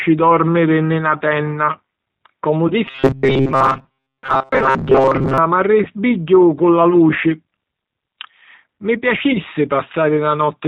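The whole clip runs through the G.729 codec at 8 kbit/s. The speech is rebuilt from a vocal-tract filter and a few pulses per frame, so nothing gets above 4 kHz, and the voice comes out thin, a bit rough and plainly synthetic the entire way through.

At about 2.68 to 2.73 s there's VoIP packet loss concealed by the speech codec. Roughly 20 ms goes missing, which fits a single lost packet. The decoder fakes it by stretching the last pitch and filter into a brief buzzy tone or coloured noise that fades, and the voice sounds slightly off just after.

From 2.87 to 5.38 s the sound turns into a rigid, metallic buzz pitched at 133 Hz that still loosely tracks the speech. That's likely robotic sound from repeated short buffers. Most of the real audio in that stretch gets skipped while a chunk of about 7.5 ms is looped, and the looping is what pins the pitch.

The same concealed packet loss comes back twice more, at 5.83 to 5.88 s and 9.33 to 9.40 s. 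Each time it's about 20 ms lost, patched over by that same short, fading extrapolation from the last pitch and filter.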